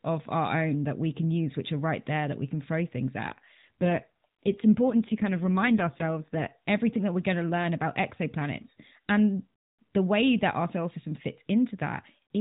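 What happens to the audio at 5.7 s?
At 5.7 s the speech is inside an AMR rate drop, from 3.30 to 6.52 s. The weak link forces fewer bits, which fits roughly 12.2 falling to 5.9 kbps. The voice turns rougher and more synthetic, without any gap.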